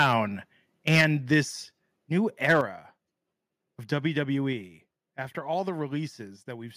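Harsh, crackling distortion caps the loudest syllables from 0.00 to 0.13 s, 0.87 to 1.05 s, 1.32 to 1.38 s and 2.44 to 2.61 s, with peaks pushing roughly 2 to 9 dB past the converter's limit and a few percent of samples flattened. This is microphone overload, likely from input volume set so high that the converter clips the waveform tops. The overall level then drops abruptly, by about 4 dB at 1.01 s, about 6 dB at 2.61 s and about 3 dB at 4.53 s, with speech and background quieting together. Each drop is the microphone volume being stepped down, likely by the call software cutting input gain after detecting clipping. The first comes during a distorted peak, and the second right as one ends.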